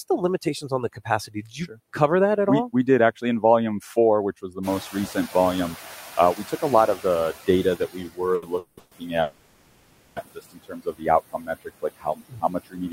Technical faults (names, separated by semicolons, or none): noise suppressor artifacts; speech cut by the noise suppressor; noise suppressor catching up; short stall from a late packet; call audio freeze